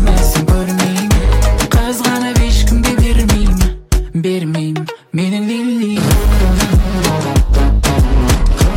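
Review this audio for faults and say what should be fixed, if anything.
Hard clipping runs through the whole clip: the signal is driven about 4 dB past what a stage can pass, so peaks are sliced flat. Roughly 7 percent of samples hit the ceiling, adding high harmonics heard as crackle on louder moments. Reduce gain before the overloading stage, leaving several decibels of headroom, or place a limiter ahead of it.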